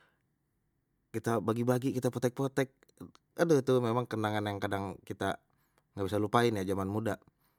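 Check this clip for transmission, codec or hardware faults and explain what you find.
The clip shows one fault, present throughout the speech: generation loss. The sound is swirly and hollow, and consonant attacks are smeared. Nothing is heard above about 20.1 kHz. The likely cause is repeated lossy coding, with the audio passed through MP3 roughly three times at rates near 150 kbit/s. Each new pass quantises on a shifted frame grid, so noise and spectral gaps pile up beyond what one encode at that rate would leave.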